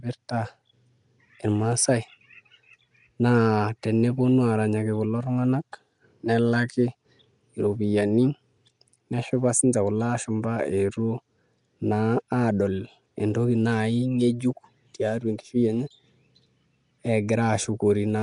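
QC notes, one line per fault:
throughout Nellymoser compression. The speech has a rough, hissy halo and a smeared, underwater sound. Nothing is heard above 10.6 kHz. The likely cause is the Nellymoser Asao codec. It gives weak bands no bits and fills them with noise, fitting a bitrate near 44 kbps.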